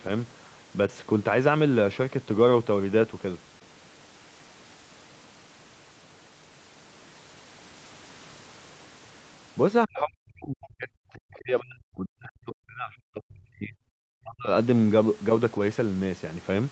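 A speech recording with two echo-canceller faults. From 9.86 to 13.77 s, and again from 14.21 to 14.50 s, the voice sinks sharply, by around 40 dB at worst in the first stretch and roughly 35 dB in the second. This is speech suppressed in double talk. The likely cause is an echo canceller that heard both ends talking at once, could not tell this talker from loudspeaker echo, and turned everything down. Between 9.95 and 9.99 s, a brief scrap of the other side's voice leaks through at roughly 15 dB below the speech. It likely comes from loudspeaker echo the canceller failed to remove from the microphone.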